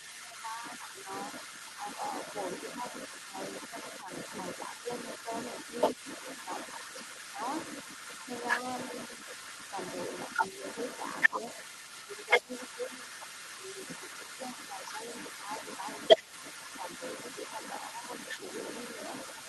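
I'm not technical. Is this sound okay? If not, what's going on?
No. Throughout the recording, a second, quieter voice sits underneath the main talker. This is the other side's voice leaking through, most likely because the talker's device played the other person aloud and the echo canceller didn't fully strip that sound from the microphone.

In the first two seconds, the main voice dips noticeably, fairly sharply for about a second in total. From 3.08 to 18.97 s, it drops again in milder, scattered moments adding up to roughly four seconds. This is speech suppressed in double talk, likely because both people spoke at once and the echo canceller turned down the real voice along with the echo.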